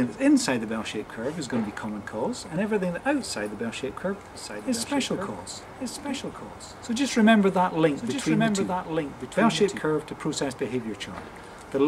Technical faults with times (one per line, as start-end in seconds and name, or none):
4.35-9.79 doubled audio track